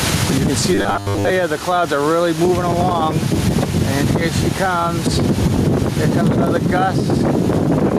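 Gain pumping runs throughout: the level swells and ducks by about 10 dB under each loud sound, likely from excessive gain hitting a fast limiter.

Robotic sound from repeated short buffers appears from 0.75 to 1.30 s. Most of the audio is replaced by repeats, giving a rigid 100 Hz metallic buzz. This likely comes from a roughly 10 ms buffer replayed while new data arrived too slowly.

A dropped buffer (overrun) occurs at 4.21 s and again at 5.93 s. The sound jumps forward, losing a few tens of milliseconds and then a shorter piece, likely because samples were overwritten before being read.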